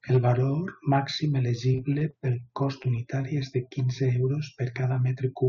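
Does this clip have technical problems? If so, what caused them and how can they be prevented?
Yes. From 0.14 to 0.31 s the peaks crackle: hard clipping, where the signal overdrove a stage by about 3 dB and its tops were sheared flat. Keeping about 3 dB more headroom in the input gain would prevent it.

Between 1.69 and 2.14 s the sound turns choppy and robotic. This is repeated packet loss: six separate gaps, the longest 23 ms, each patched by stretching the previous sound, so roughly a quarter of that span is synthetic fill. A steadier network path, or forward error correction in the call codec, would prevent it.

At 2.82–2.89 s there is a brief smear where about 20 ms of audio went missing. This is short concealed packet loss: the receiver filled the hole from the preceding sound, adding a few milliseconds of delay, then blended back into the real audio. Reducing network jitter, or allowing a slightly deeper jitter buffer, would prevent it.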